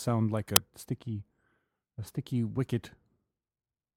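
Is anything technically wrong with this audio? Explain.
Yes, there's an uninitialised buffer at about 0.56 s: a block got played before any audio was written into it, so stale memory came out as samples. You hear a roughly 6 ms loud crack, which fits a 256-sample buffer.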